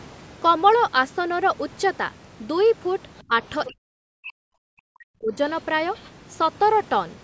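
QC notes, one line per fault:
3.18 to 3.22 s and 5.94 to 6.11 s, other side's voice leaking through: a faint second voice surfaces briefly beneath the talker, about 35 dB down in the first scrap and about 30 dB down in the longer second one. The likely cause is the far end playing from the talker's loudspeaker back into the microphone, with the echo canceller leaving a residue of it that carries through into the send path.
3.27 to 3.33 s, 3.67 to 3.99 s, 4.2 to 4.59 s and 4.76 to 5.38 s, speech suppressed in double talk: the talker's level drops sharply in pieces, by about 20 dB in the first short dip and by as much as about 40 dB in the later ones, so the speech dips while another voice is active. Most likely the echo canceller could not tell the talker from loudspeaker echo during overlapping speech and attenuated everything.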